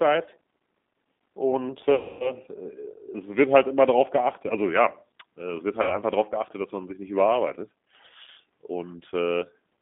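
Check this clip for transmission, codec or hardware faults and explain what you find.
Two faults are present: G.729 codec coding throughout, and three bursts of VoIP packet loss concealed by the speech codec.

The G.729 codec runs for the whole clip at 8 kbit/s, with the line band limited to about 200 Hz to 3.6 kHz. It rebuilds speech from a vocal tract filter, a pitch predictor and a few pulses per frame. The result is intelligible but audibly rough and synthetic. There is no air above the band.

The packet loss concealment occurs at 1.95 to 2.36 s, 5.82 to 5.99 s and 8.24 to 8.29 s. The gaps are about 250 ms, 70 ms and 30 ms, which fits runs of lost 10 ms frames. The decoder repeats its last pitch and filter while lowering the gain. The first gap stretches out and fades. The sound stays weak briefly after packets return.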